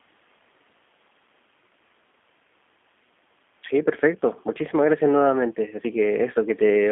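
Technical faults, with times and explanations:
Throughout, G.729 codec. The speech is confined to a narrow telephone band, roughly 200 Hz to 3.5 kHz, so it sounds thin and muffled with no upper sibilance. Its texture is plainly rough and synthetic, which fits an 8 kbit/s coder. Each 10 ms frame is rebuilt from a vocal tract filter, a pitch predictor and a few pulses rather than the original waveform. The faint room noise, about 40 dB below the speech, comes through this same coarse model.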